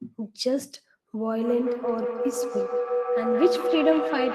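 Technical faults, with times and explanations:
1.25–4.35 s, feedback howl: a ringing tone around 500 Hz swells, pulsing roughly every 150 ms, until it reaches about 1 dB below the speech. Sound from a loudspeaker re-entered a nearby microphone, gaining level each trip and narrowing to the loop's favoured pitch.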